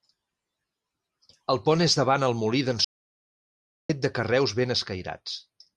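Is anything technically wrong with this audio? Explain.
Yes. From 2.85 to 3.89 s there is an audio dropout to silence: the input was likely lost, through a disconnected device, failed link or mute, while recording continued writing silence. The speech cuts off mid-flow into about 1.05 s of silence, with no room tone, then resumes abruptly.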